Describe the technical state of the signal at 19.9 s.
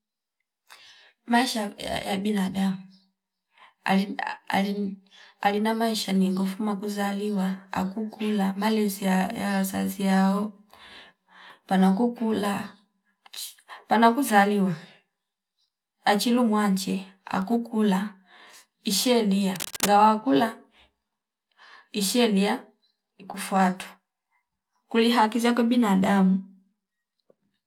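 At 19.9 s the speech is closing out a burst of cable scratch noise running from 19.56 to 19.92 s, likely from a worn cable or connector being moved so its contact resistance flickers. It sounds like harsh scratching only slightly quieter than the speech, and shows as dense, ragged broadband smears with jagged spikes.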